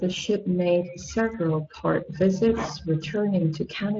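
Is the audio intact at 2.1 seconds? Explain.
No. At 2.1 seconds the speech carries Speex codec damage, present throughout the clip. This CELP coder models the voice with a limited excitation budget, which fits a bitrate of about 20 kbps, leaving the speech plainly hoarse, grainy and noisy.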